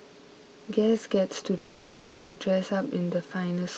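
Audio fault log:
1.57–2.39 s, call audio freeze: the sound halts and a fading buzz fills 0.79 s, then resumes exactly where it stopped, likely from delayed packets draining the jitter buffer. A spectrogram shows a smeared, decaying band without new detail, under the call codec's 8 kHz ceiling.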